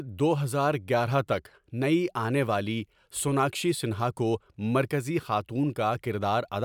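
No technical faults are audible anywhere in the speech.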